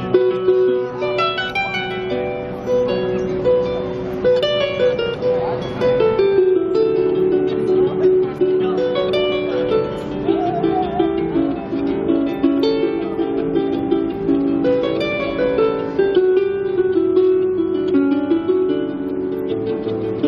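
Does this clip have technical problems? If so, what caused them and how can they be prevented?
No technical faults are audible.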